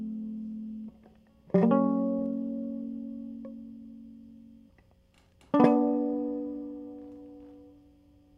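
At about 2.19 s the music hits a short burst of rough noise that runs to 2.23 s, roughly 36 ms, and then stops dead. That's a corrupt FLAC frame. Some bits inside a compressed frame got flipped and the decoder didn't catch it with the checksum, so the predictor kept building samples from bad values until the frame boundary. It peaks at only about -34 dBFS, so it's a brief gritty scratch rather than a loud blast. The clean cutoff fits a single damaged frame.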